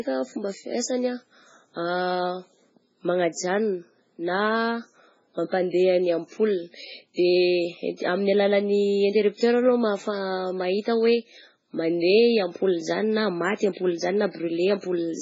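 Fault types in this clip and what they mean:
MP3 compression: The speech has nothing above 7.6 kHz, and weak spectral detail switches on and off between frames, giving a heavy watery, swirly texture with smeared attacks. The likely cause is strong MP3 encoding at a very low bitrate, around 16 kbps.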